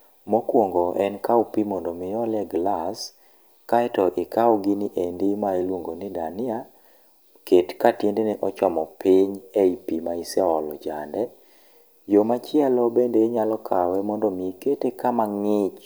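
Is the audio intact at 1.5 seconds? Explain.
Yes, at 1.5 seconds the speech plays through intact, with no dropout, click, distortion or other fault at that moment.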